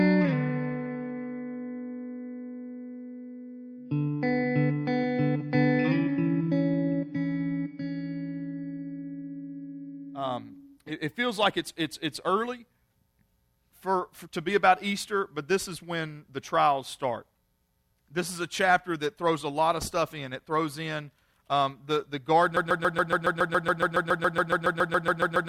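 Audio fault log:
22.57–25.48 s, broken-record loop: one 140 ms fragment repeats identically, back to back, 21 times until the clip ends, replacing the audio that should have played. This is likely a stalled player or stream resending its last fragment. Unlike echo, the repeats never fade and no new sound continues underneath.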